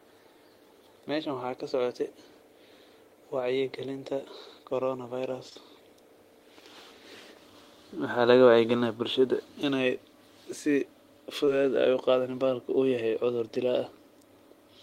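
Speech with short concealed packet loss in two places: two back-to-back losses from 5.49 to 5.57 s, and a single one from 11.45 to 11.49 s. In each, about 20 ms of audio arrived too late for the decoder, so the receiver extended the preceding sound and blended it back in. Unlike a plain dropout, the holes are not silent. They come through as a brief smear or wobble.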